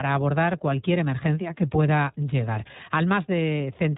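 Throughout the speech, the iLBC codec's artefacts are plainly audible: nothing passes above 3.8 kHz, and each short frame's excitation is coded on its own, which fits the 15.2 kbps mode with 20 ms frames. The speech sounds muffled, slightly rough and synthetic. A spectrogram shows a flat ceiling at 3.8 kHz.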